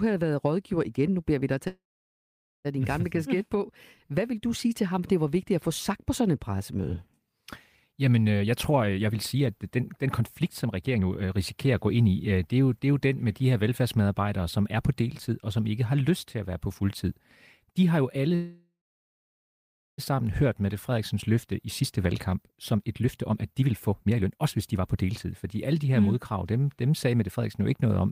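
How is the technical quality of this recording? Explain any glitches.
The recording has two kinds of glitches: two call audio freezes and three stretches of jitter buffer speed-up.

At 1.67 to 2.67 s, and at 18.35 to 20.0 s right after "de har jo alle", packets were likely stalled in transit and the jitter buffer emptied. The receiver stretched the last sound into a fading tail, then silence of about 0.85 s and 1.25 s. The speech resumes where it stopped, so these pauses are added rather than anything being lost.

Elsewhere the buffer held more audio than it aims for, so the receiver trimmed pitch-period-sized slices repeatedly. From 8.39 to 12.39 s, just before "det er jo det", the speech runs about 125% fast, and from 21.47 to 25.45 s, before "alle de her mm", about 118% fast. Both sound hurried but keep their pitch. From 27.07 s to the end there is a slight 106% rush.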